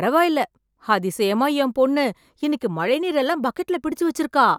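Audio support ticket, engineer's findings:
No audible faults found.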